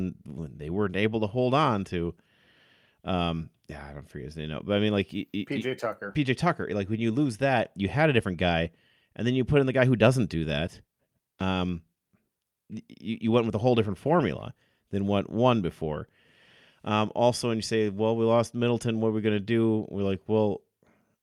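A recording of speech with no audible technical faults anywhere in the signal.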